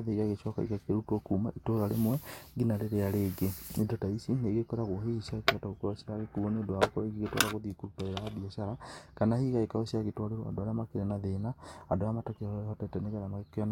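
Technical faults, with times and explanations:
7.59 to 9.29 s, channel delay (comb filtering): for this stretch of speech one channel runs late by about a single sample, roughly 0.02 ms, before the two are summed to mono. Content common to both channels cancels at evenly spaced frequencies, but with so short an offset the first notch sits up near 20 kHz. The result is a dulling of the top end rather than a hollow or phasey colour.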